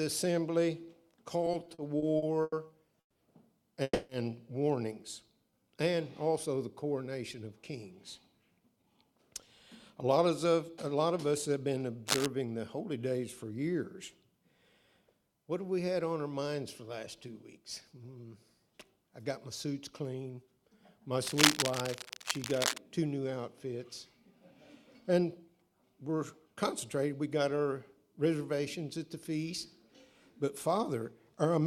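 Repeated stalls (stutter) run from 1.45 to 3.17 s. Packets reached the receiver late, so its jitter buffer emptied ten times. Each gap was bridged by stretching the last sound, for 420 ms in all and up to 150 ms at once. Nothing is lost, but the audio drags and stutters.

A call audio freeze follows at 3.83 to 4.11 s. The sound holds as a fading continuation for 260 ms, ending in about 30 ms of silence, then resumes where it stopped. The likely cause is held-up packets draining the buffer, which adds a gap without losing any content.

A jitter buffer slow-down at 5.34 to 5.64 s plays the audio at 89% speed, adding 40 ms. The receiver repeated single pitch periods to rebuild its reserve, so sounds are drawn out at unchanged pitch.

Jitter buffer speed-up first appears from 7.45 to 11.75 s at 106% speed, removing roughly 300 ms. Too much audio had built up in the buffer, so the receiver cut short pitch-period pieces repeatedly. 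The audio sounds hurried but keeps its pitch.

Cable scratch noise appears at 12.07 to 12.26 s: dense, uneven rustling about as loud as the sound itself, likely from a worn cable or connector being moved so its contact resistance fluctuated.

A second, longer burst of cable scratch noise runs from 21.22 to 22.78 s with the same scratching character and a similar level.

Jitter buffer speed-up returns twice. From 24.27 to 26.56 s the audio runs at 105%, losing about a tenth of a second. From 28.19 to 28.6 s it runs at 108%, shedding a few tens of milliseconds. Both passages are rushed at the same pitch.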